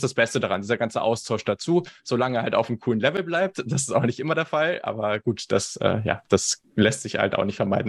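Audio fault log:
Nothing to log here, since no faults turn up anywhere in this bit of speech.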